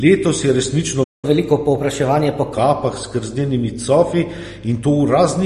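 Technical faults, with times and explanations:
Throughout, mains hum: a steady 50 Hz tone sits about 20 dB below the speech, from power-line coupling such as a ground loop, and it holds constant in pitch.
Throughout, MP3 compression: a watery, swirly texture on sibilants, likely from MP3 at a low bitrate around 38 kbps, with weak spectral lines switching on and off.
1.03–1.25 s, playback stall: right after "je resnično" the sound drops to silence for about 0.19 s, likely the player running out of data. It then resumes where it stopped, with nothing skipped.
1.25–2.54 s, catch-up at higher speed: playback runs 1.15 times fast, raising the pitch by roughly two semitones while the backlog is resampled, then settles back to normal speed.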